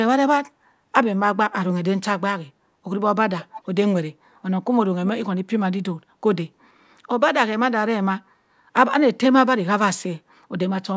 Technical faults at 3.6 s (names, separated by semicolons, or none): echo leak